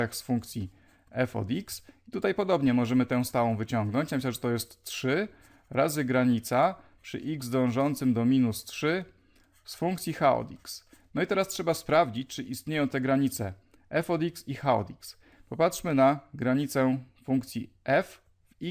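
No audible technical faults.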